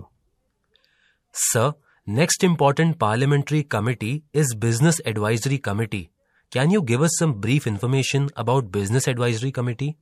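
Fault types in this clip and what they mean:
Pre-echo: The codec spreads quantisation noise over a whole block, so noise meant for an attack fills the quiet before it. From 3.69 to 3.71 s, hiss rises about 14 dB ahead of an attack. This fits long 36 ms blocks, never switched short.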